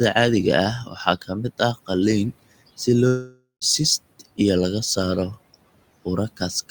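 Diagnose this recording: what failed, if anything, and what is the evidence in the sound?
Speech cut by the noise suppressor, a call-processing fault, occurs from 0.85 to 0.97 s. For roughly a tenth of a second the speech sinks by up to about 9 dB, so the sounds there come out swallowed and faint. The suppressor misjudged that low-level speech as the room noise, which sits about 23 dB under the speech, and turned it down. The timeline stays intact, with no gap and no artificial fill, which separates it from a dropout.

A long network dropout runs from 3.07 to 3.64 s. The receiver carries the last sound forward as a buzz that fades over the stretch, and a final 0.13 s is plain silence before the audio returns. Around 0.54 s of material never arrives and is skipped rather than delayed. A burst of lost packets is the likely cause. Unlike the suppressor cut, the speech is replaced by a synthetic tail and then missing, not merely turned down.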